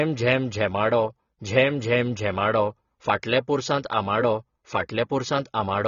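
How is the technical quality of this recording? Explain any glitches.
The technical quality is poor, with one fault running through the whole recording. The speech was likely squeezed through AAC compression at a low bitrate, in keeping with roughly 24 kbps AAC-LC. The encoder discarded everything above 6.9 kHz and quantised the remaining bands coarsely, so the speech sounds dull and smeared, with an audible warbling, fizzy texture on sustained sounds and sibilants.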